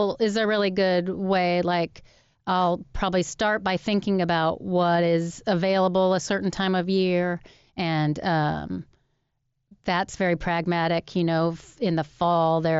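No faults can be heard.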